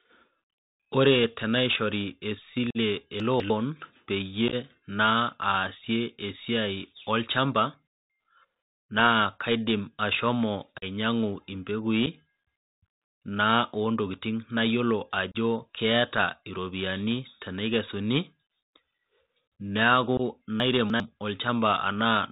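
The whole clip carries the sound of a Bluetooth CVSD headset codec, and the damage is plainly audible. The band stops at 4 kHz, which fits a 64 kbps CVSD link. This codec sends one bit per sample, only up or down, with an adapting step. Fast, loud rises outrun that step and smear. S sounds come out scratchy. A grainy hiss sits under the speech throughout.

At 2.70 to 2.77 s comes the first unconcealed Bluetooth headset packet loss. About 45 ms of speech drops out with hard edges. That points to roughly ten lost packets. More gaps follow. At 4.48 to 4.54 s about 30 ms is lost in small scattered holes, the longest near 11 ms, so it sounds chopped and crackly. Then come a 41 ms hole at 10.78 to 10.84 s, a tiny 7.5 ms dropout at 12.06 s, 30 ms at 15.32 to 15.35 s, and 22.5 ms at 20.17 to 20.21 s. Each edge can click. Nothing fills the holes.

Between 3.2 and 3.5 s, chunks play out of order. 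A 100 ms chunk arrives two chunks late and plays after audio that should follow it. Nothing is missing, but the sequence is jumbled, with three hard joins. At 20.6 to 21.0 s it happens again. This time a 100 ms chunk lands three chunks late. The passage sounds garbled, with abrupt seams around the displaced piece.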